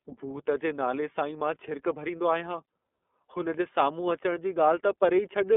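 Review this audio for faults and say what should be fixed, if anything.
The speech path runs through the iLBC codec for the whole clip, coding each frame independently at a rate that fits 13.3 kbps with 30 ms frames. Nothing passes above 3.8 kHz, the line band sits at 250 Hz to 3.5 kHz, and plainly audible coding damage leaves the speech rough and synthetic. To prevent it, carry the call on a wideband codec such as Opus rather than narrowband iLBC.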